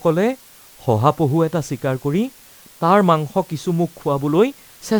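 Spoken audio carries low bit depth with dither for its whole length: a constant, even hiss roughly 30 dB below the voice, which fits 8-bit quantisation with dither added before rounding. On a spectrogram it appears as a flat noise floor across all frequencies, and the waveform shows a fuzzy band even through pauses.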